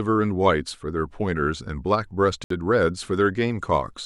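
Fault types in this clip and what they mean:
Bluetooth stall: Radio interference likely delayed packets on the wireless link, so the headphones' buffer emptied and playback halted until the resent data arrived. The speech drops to silence for about 63 ms, from 2.44 to 2.50 s, then resumes.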